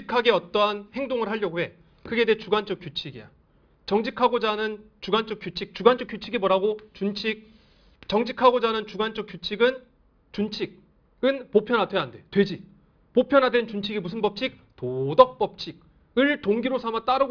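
No technical faults are audible.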